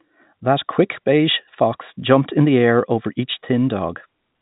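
No technical faults can be heard in this speech: it carries the narrow band of G.711 telephone coding, with nothing above 4 kHz and only a faint level-following quantisation hiss beneath it, and nothing goes wrong at any point in the audio.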